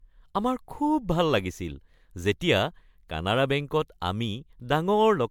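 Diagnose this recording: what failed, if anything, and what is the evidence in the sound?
The failure is at the codec stage: the speech was likely decoded and re-encoded repeatedly with MP3, about seven times, at a rate consistent with 128 kbit/s. This is generation loss. Throughout the recording the voice sounds swirly, smeared and hollow, and consonant onsets are blurred. Each pass quantises on a shifted frame grid, so noise and spectral holes pile up. Because the band still reaches 20 kHz, the damage comes from accumulated quantisation, not from bandwidth loss.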